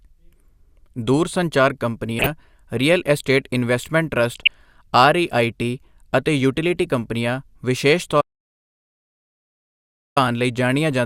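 From 2.18 to 2.30 s, just before "ਰੀਅਲ ਇਸਟੇਟ ਇਨਵੈਸਟਮੈਂਟ", and again from 4.19 to 4.48 s, right after that phrase, DAB burbling breaks into the speech. A weak signal let bit errors of roughly a few tenths of a percent slip past error correction, so wrong samples put noise into individual sub-bands. Unlike a dropout glitch, the speech never stops. Short blips of noise sit on top of it instead.

After "ਅਤੇ ਯੂਟਿਲਿਟੀ ਕੰਪਨੀਆਂ ਵਿਸ਼ੇਸ਼", an audio dropout to silence runs from 8.21 to 10.17 s, about 1.95 s. The input was likely lost while recording continued. The gap is silent with no room tone, which sets it apart from a noise gate or a pause.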